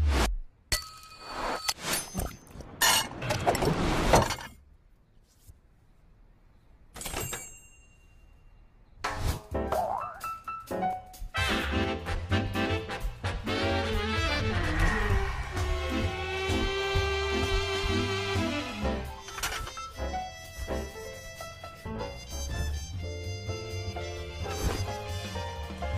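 Between 10.55 and 11.31 s there are CD scratch ticks: a blemish on the disc wipes out more data than the error correction can reconstruct, once on each turn, so the player has to fill in or mute the damaged samples. The result is five short, regular ticks, roughly six to seven per second, each a tiny gap or click lasting no more than a couple of milliseconds, cutting sharply into the sound.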